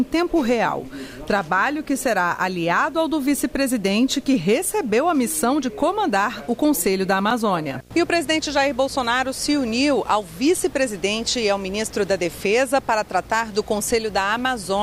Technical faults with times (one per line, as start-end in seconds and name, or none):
0.00-14.82 video or display buzz